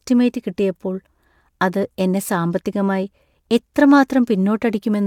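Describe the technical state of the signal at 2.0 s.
At 2.0 s the speech signal is intact, with no audible dropout, distortion, clipping or other technical fault at that point.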